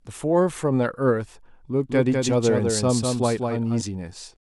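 From 1.89 s to 3.81 s the speech gains a second, quieter copy of itself, trailing roughly a fifth of a second behind and about 5 dB down. This doubled audio track sounds like a hard, dry slapback with no room tail or fading, and it switches on and off abruptly at those edges. The likely cause is the same signal reaching the mix twice, once through a slower path or an out-of-step edit.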